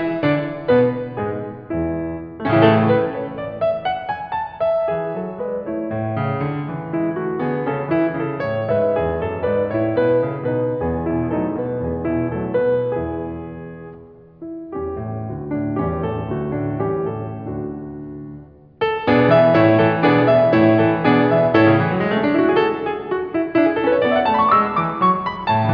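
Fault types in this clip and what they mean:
No faults detected.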